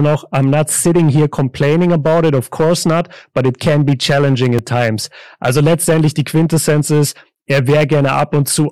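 Hard clipping runs through the whole speech clip. Some stage received a signal roughly 9 dB hotter than it could pass, so every peak above its ceiling was sheared off flat, and around 7 percent of the samples sit pinned at that limit. The flattened tops generate a spray of high harmonics, heard as a harsh, gritty fuzz on the louder syllables and a crackly edge wherever the level rises.

At 4.59 s, between "it can be challenging" and "at times", a block of digital silence of about 2.2 ms cuts into the signal. The output there dropped to zeros, most likely because the buffer was not filled in time, and the waveform jumps to zero and back with no fade. At this length the hole itself is too brief to register as a gap. It comes through as a single sharp tick.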